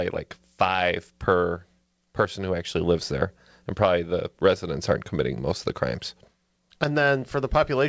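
No technical faults are audible.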